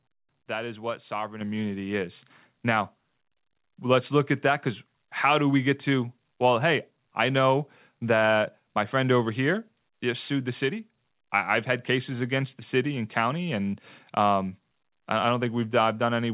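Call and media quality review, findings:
Loudspeaker feedback squeal, 0.88–3.84 s: steady 6.3 kHz tone swelling over roughly a second and a half to around 10 dB above the talker. Mic is hearing its own speaker; loop gain tops one at that frequency, so it self-sustains.

Same squeal again at 9.22–11.02 s, same 6.3 kHz pitch, faster build (about a second). Same loop, same trouble frequency. Sits well above the call path's 4 kHz ceiling.

Microphone volume stepped up at 1.41 s: voice and room noise jump together by 7 dB in one hit, right while the first squeal is building. Looks like the call software's auto-gain bumping the input level. That extra gain won't help the feedback.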